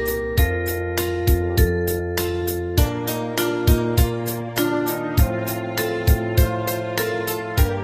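Nothing in this recording stands out as a technical problem; there's no moment where the sound trips up or goes wrong.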